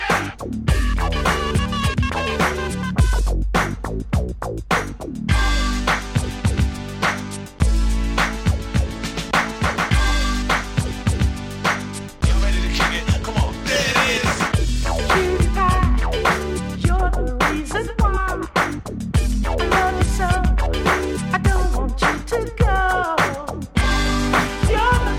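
Nothing stood out on listening; no technical fault could be heard anywhere in the recording.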